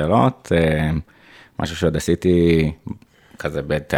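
Nothing stood out on listening to this speech recording.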